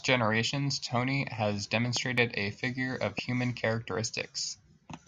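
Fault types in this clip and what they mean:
Loud pop: sharp pulses added over the speech, a pair at 1.97–2.20 s and one at 3.18–3.21 s, peaking about 10 dB above it, likely a voltage step from a plug, switch or static. Waveform: tall narrow spikes; spectrogram: thin full-band vertical lines.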